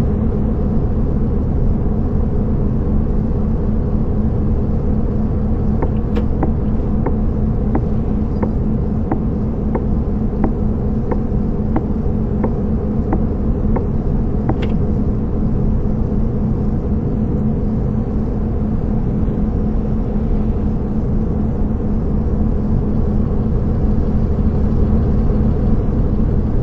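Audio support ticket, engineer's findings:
Stereo read as mono, whole clip. Playback at 0.5x speed, pitch 12 semitones down, a full octave. Fainter mirror image of the content in the upper half of the spectrum. Component: decoder or file reader misreading the channel count. Interleaved left and right samples are consumed as one channel. Each stereo frame becomes two mono samples, doubling the duration. Fix: correct the channel flag in the header or reader config.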